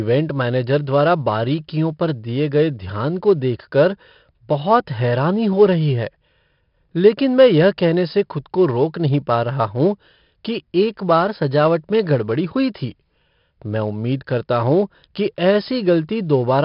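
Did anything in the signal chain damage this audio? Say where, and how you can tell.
Yes, at the codec stage, for the whole clip. The speech carries a gritty, level-following hiss that swells on every loud syllable and roughens sharp onsets. Nothing is present above 5.3 kHz, so the sound is also dull. This is heavy 4-bit ADPCM compression. Each sample is coded as a coarse step from a prediction, so the error rides the signal, and attacks distort when the adaptive step lags. The band limit points to roughly an 11 kHz sample rate, near 44 kbps.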